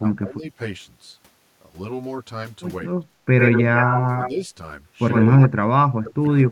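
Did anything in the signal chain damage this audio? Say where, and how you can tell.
Yes. Three separate faults are audible.

Channel delay (comb filtering) runs through the whole clip, most likely from the stereo-to-mono stage. One channel lags by around 10 ms, so the summed speech sounds hollow and phasey. A spectrogram shows fixed horizontal notch bands starting near 50 Hz and repeating about every 100 Hz.

Speech suppressed in double talk appears at 0.0 to 0.59 s, dipping about 15 dB over roughly 0.3 s. It recurs at 4.3 to 4.5 s, a shallower dip of about 5 dB, and from 5.25 s to the end, where it drops about 35 dB for about a second. The likely cause is the call processor's echo canceller ducking the near talker. On a waveform the envelope sags or gaps abruptly.

Echo leak is heard at 3.38 to 4.31 s, about 5 dB below the direct speech, and at 5.11 to 5.48 s, about 10 dB below. A copy trails the voice by 101 ms. 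This points to call processing, likely a loudspeaker echo that the canceller left unremoved. A spectrogram shows duplicated harmonic patterns offset about 0.1 s to the right.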